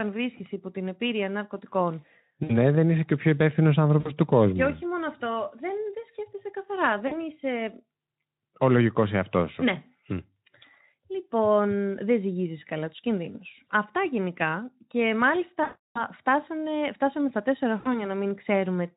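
Packet loss concealed by the speech codec breaks in at 2.43–2.58 s after "υπό την επίρρεια ναρκωτικών", 3.99–4.12 s after "και ο πιο υπεύθυνο", 7.07–7.17 s after "σκέφτεσαι καθαρά", 15.63–16.06 s and 17.79–18.10 s. The decoder replays its last pitch and filter at falling gain, so speech smears into a fading buzz or coloured noise. Gaps run about 60 ms, 40 ms and 320 ms, consistent with 20 ms frames, and the voice stays weak briefly after each. This all sits on the light, slightly noisy Speex coding.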